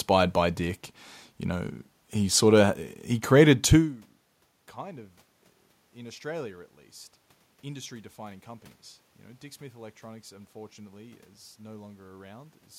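No technical faults can be heard in the speech. There is some background noise from the room, and at around three and a half seconds the level shifts as the talker moves relative to the microphone, which is part of the recording rather than a fault.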